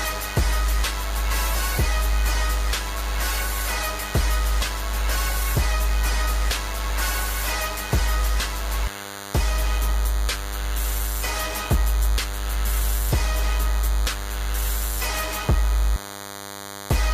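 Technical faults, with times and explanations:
Throughout: DECT cordless phone buzz. A nearby DECT handset or base sends a radio burst every 10 ms, and the audio circuitry rectifies it, so a thin, steady 100 Hz buzz rich in harmonics sits under the sound, roughly 15 dB below it.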